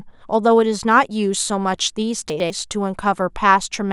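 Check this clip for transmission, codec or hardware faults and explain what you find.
One transmission fault is present. Between 2.3 and 2.5 s, the speech has chunks out of order. One 100 ms chunk arrives a chunk late and plays after the chunk that should follow it. Nothing is lost, but the sequence is swapped. Three hard joins produce a brief jumbled moment.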